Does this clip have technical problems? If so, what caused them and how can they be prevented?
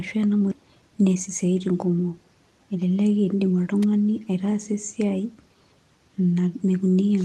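Yes, there are three faults.

At 0.51–0.53 s there is a skip ahead. About 0.4 s of speech was dropped while later audio was already queued, so playback leaps forward with no gap. The waveform shows an abrupt splice, and the spectrogram shows harmonics that change shape at one column. Sizing the jitter buffer so it absorbs bursts instead of discarding queued audio prevents this.

From 0.61 to 1.56 s, just before "kumok elelek", there is a jitter buffer speed-up. The receiver had built up excess delay, so it trimmed short pitch-period pieces repeatedly, about 100 ms in total. Speech runs at 111% speed with unchanged pitch. The spectrogram shows compressed syllable spacing with steady harmonic heights. Steadier network delivery, which avoids bunched packet arrivals, prevents this.

At 3.83 s, just before "aitaasa esiai", there is an electrical switching spike: a sharp snap sitting on top of the speech. 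The likely cause is a nearby switch or discharge arcing into the audio line. The waveform shows a near-vertical needle, and the spectrogram shows a thin full-height stripe that reaches the roughly 12 kHz ceiling of the Opus call path. Shielded cabling and keeping switching gear away from audio lines prevents it.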